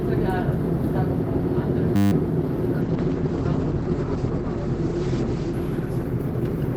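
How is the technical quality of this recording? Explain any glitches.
The recording has two clear problems.

At 1.96 s there's a system hang loop: the driver froze while the hardware kept replaying a 10 ms slice of its buffer, about sixteen times through 2.12 s. You hear a steady 100 Hz buzz, and roughly 150 ms of real audio is lost.

From 2.83 s to the end there's a call bitrate drop. The bandwidth estimate fell, so the encoder went from what sounds like 48 kbps down to around 11 kbps, bottoming out for about 1.4 s. Coarser coding makes it rough and watery, and the top end is cut from 20 kHz to 8 kHz, so it goes muffled.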